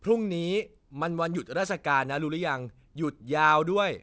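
Aliasing throughout this speech clip: content above 8 kHz folds back into the band at roughly 30 dB down, leaving gritty sibilants, which fits a drop to 16 kHz without filtering.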